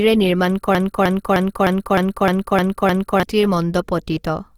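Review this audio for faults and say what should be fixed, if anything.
Opus compression runs throughout, likely at a low rate around 24 kbps in its music mode. The encoder fills starved bands with folded or noise energy instead of leaving gaps, so the speech sounds rough and grainy while still reaching about 20.3 kHz. Encode at a higher bitrate.

A broken-record loop runs from 0.75 to 3.23 s. A 0.31 s fragment repeats back to back eight times, likely because the player or stream stalled and kept resending its last buffered piece, so the speech that belonged there is lost. Add stall detection that drops or resyncs instead of replaying stale data.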